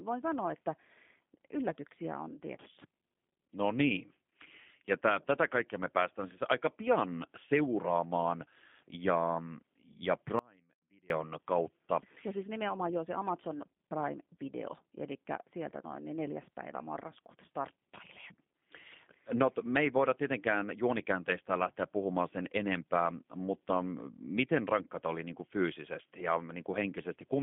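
G.729 codec damage runs through the whole clip. The speech is squeezed into a telephone band of roughly 150 Hz to 3.5 kHz and rebuilt from a coarse filter and pulse model, which fits an 8 kbit/s G.729 stream and leaves it plainly rough and synthetic.

An audio dropout to a faint residue follows "pian seuraamaan ja ja", from 10.39 to 11.10 s. The speech cuts off abruptly for 0.71 s, leaving only faint sound roughly 30 dB below normal level, likely from the signal being lost while the path stayed live.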